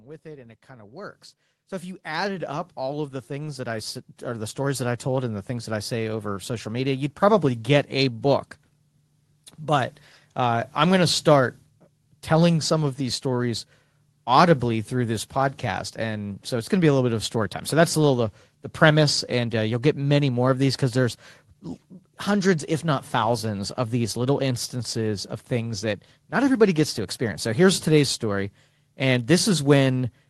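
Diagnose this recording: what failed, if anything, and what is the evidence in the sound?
The failure is in call processing: automatic gain rising. From 0.05 s to 5.33 s the speech and the background noise swell together. The level climbs by about 19 dB over those five seconds. It settles just before "the things that I". The gain control judged the input too quiet and raised its gain slowly. It cannot separate voice from room noise, so both lift together. The codec's top end stops near 12 kHz, which fits Opus in a call path.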